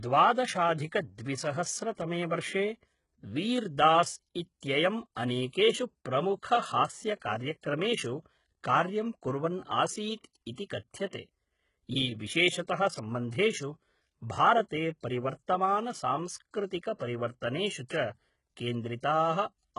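HE-AAC compression, most likely the cause of the damage heard throughout this speech recording, leaves nothing above about 11.1 kHz and degrades the sound heavily, which fits a very low bitrate around 12 kbps. The treble is not carried directly. It is rebuilt from copied lower bands under a coarse envelope, so the upper harmonics fail to line up with those below the crossover, and sibilants come out gritty, metallic or lispy. Pre-echo appears from 11.10 to 11.13 s, spreading over 32 ms, and again at 17.88 s, spreading over 18 ms. Each time, the codec's quantisation noise, sized for a sharp attack landing late in a transform block, smears back into the quiet moment before it. A brief hiss leads the onset, and the attack itself loses its edge.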